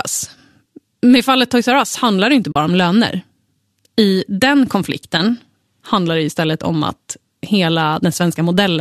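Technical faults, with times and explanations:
2.52–2.56 s, AAC frame loss with muting: right after "handlar det inte" and before "om löner", the speech drops into a short soft-edged gap of about 40 ms, which fits roughly four lost frames. The decoder zeroed their spectrum, and the overlapping windows fade the sound down and back up instead of cutting it, giving a brief hollow dropout. The slight low-delay AAC colouring around it likely comes from AAC-ELD.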